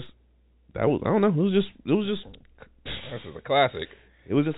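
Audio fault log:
No faults are heard in the speech. The G.711 telephone coding is audible as a band that stops near 4 kHz, with any quantisation noise following the level of the speech, which fits 64 kbps mu-law.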